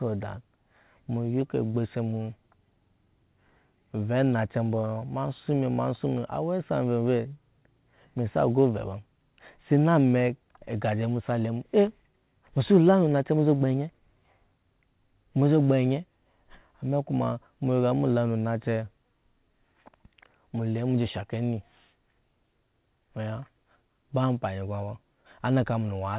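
No technical faults can be heard in the speech, which has passed through a working call path and carries nothing above 4 kHz, the narrowband limit of a telephone codec such as G.711 mu-law.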